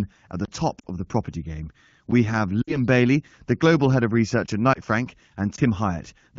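At 0.45 to 0.48 s, between "at the" and "top of the property", a block of digital silence cuts about 30 ms of sound to silence. Shorter blocks follow at 2.11 s, right after "of the property game" and lasting about 8 ms, then at 4.46 to 4.48 s and 5.56 to 5.58 s, each 20 ms. Each time, output samples were probably not delivered in time and zeros took their place. The signal stops and restarts instantly. The 8 ms block sounds like a tick and the longer ones like tiny holes.

At 0.79 to 0.86 s, between "at the top" and "of the property game", lost AMR speech frames produce a fading dip instead of a click. Further losses occur at 2.62 to 2.79 s and 4.74 to 4.80 s. With the frames corrupted, the AMR-WB decoder repeated the last good pitch and vocal tract settings at decreasing gain. The 20 ms loss is a brief dip or warble, and the 40 ms and 60 ms losses, which fit two and three missing 20 ms frames, drop the sound to near silence. 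The surrounding 12.65 kbit/s HD Voice coding remains clear. The faded tail and the rough recovery distinguish them from the hard-edged silence blocks.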